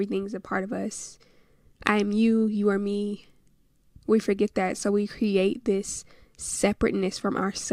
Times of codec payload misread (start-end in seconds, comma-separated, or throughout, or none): none